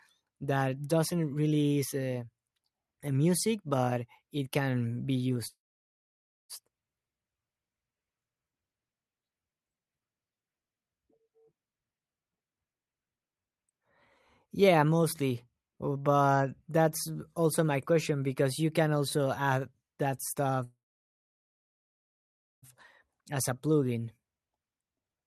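At 5.47 s there's a call audio freeze. The sound stops and holds for about a second, to 6.52 s. Almost all of that, about 0.94 s, is silence after a short tail-off. The likely cause is packets being held up so the jitter buffer ran dry. When playback resumes it continues from where it stopped, so nothing is lost, but everything after it now runs about a second later.

From 14.45 to 16.03 s you get a jitter buffer speed-up. The receiver trims tiny pitch-period slices over and over, cutting around a fifth of a second to claw back that delay. The result plays at 112% speed with the pitch unchanged, so it sounds a bit rushed.

A second freeze hits at 20.64 s and lasts roughly two seconds, to 22.65 s, with about 1.86 s of dead air. Again, a likely stall in packet delivery. The audio picks up intact but later still.

Right after, from 23.08 s to the end, the speed-up kicks in harder at 121%, trimming about half a second. 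That stretch sounds noticeably hurried.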